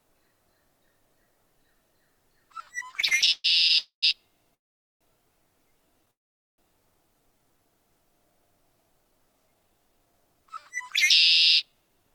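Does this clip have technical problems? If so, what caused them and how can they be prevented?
Yes. Four kinds of network-related fault can be heard.

Repeated stalls (stutter) run from 2.91 to 3.76 s. Twelve short gaps interrupt the sound, the longest about 129 ms, and together they fill roughly 31% of that span with concealment while nothing is lost. Packets were arriving late or too slowly, so the jitter buffer kept running dry and the receiver stretched the last sound each time. On a waveform this shows as a ragged run of repeated, slightly decaying fragments. A spectrogram shows smeared, horizontally repeated slices. Prevention: give the jitter buffer more headroom and reduce upstream congestion.

Call audio freezes occur at 3.78–4.04 s, 4.54–5.03 s and 6.11–6.60 s, inserting about 245 ms, 461 ms and 471 ms of concealment with nothing missing. In the first, a fading continuation of the last sound gives way to about 120 ms of silence. 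The other two are almost entirely silent, about 460 ms each. The likely cause is packets held up in transit, emptying the jitter buffer until the audio resumes where it stopped. A waveform shows a decaying tail and then a flat line. A spectrogram shows a brief smear followed by a blank column. Prevention: prioritise voice traffic with QoS and avoid congested or unstable links.

A jitter buffer slow-down spans 5.97–7.58 s. The receiver repeated single pitch periods and pause fragments to rebuild its reserve, adding about 66 ms, so playback runs at about 96% speed with unchanged pitch and slightly drawn-out sounds. On a spectrogram, harmonic bands stay at the same height but stretch horizontally. A waveform shows near-identical repeated cycles. Prevention: keep network delay stable so the buffer rarely needs to expand.

A jitter buffer speed-up runs from 8.98 to 12.11 s. After excess audio had built up, the receiver trimmed short pitch-period pieces, removing about 0.3 s in total, so playback runs at about 108% speed at the same pitch and sounds hurried. 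On a spectrogram, features are compressed in time while frequencies stay put. A waveform shows tiny splice points between cycles. Prevention: reduce delay bursts so delayed packets don't arrive in clumps.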